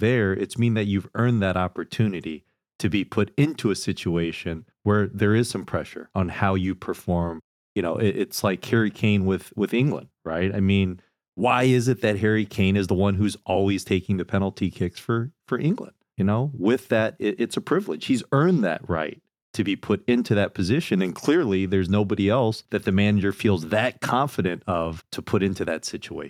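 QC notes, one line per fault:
No faults found; speech heard with nothing to log.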